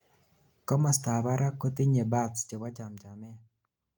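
No technical faults are audible.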